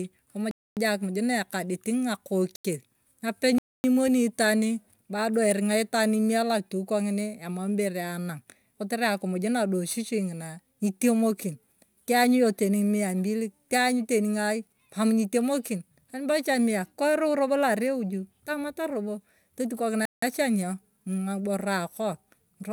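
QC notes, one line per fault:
throughout, sample clock jitter: a fine hiss and roughness rides on the speech, roughly 30 dB below it, from sampling instants wandering by a few microseconds. Each timing error turns into an amplitude error in proportion to how fast the waveform is moving, so the grit swells on loud and sibilant moments and disappears in pauses. A steady noise floor or dither would stay the same level regardless of the signal.
0.51–0.77 s, 2.56–2.65 s, 3.58–3.84 s, 20.05–20.22 s, block of digital silence: the speech cuts abruptly to silence for 256 ms, 85 ms, 256 ms and 171 ms, then resumes with no fade. The lengths fit whole buffer-sized blocks, pointing to output buffers that were not filled in time. A fade or low-level dropout would keep some noise floor, but these holes are dead silent and hard-edged.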